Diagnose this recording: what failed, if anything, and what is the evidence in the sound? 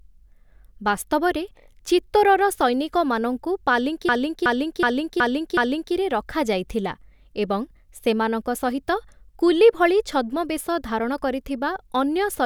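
The failure is a system hang loop at the driver or buffer stage. From 4.09 s to 5.94 s, just after "ବାସ୍ତବରେ ଚିତ୍ତୋରର ସୈନିକମାନଙ୍କୁ", one 371.52 ms slice of speech repeats exactly, five times over. That makes a machine-gun stutter at 2.69 Hz. The host stalled while the hardware kept replaying its ring buffer. The loop length fits a 16384-sample buffer. Speech resumes with "ରଖାଯାଇଥିଲା ଏବଂସେମାନଙ୍କ ସହିତ କୁଲି", with essentially nothing skipped.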